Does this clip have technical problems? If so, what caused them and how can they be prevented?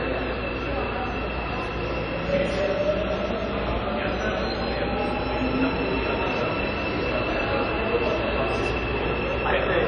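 Yes. The whole clip has a ringing, washy character, with hiss that swells and fades along with the sound and nothing above 9.9 kHz. That points to likely WMA compression at a low bitrate, around 32 kbps, where long transform blocks smear quantisation noise and weak detail gets zeroed. To avoid it, keep the original or encode at a much higher bitrate.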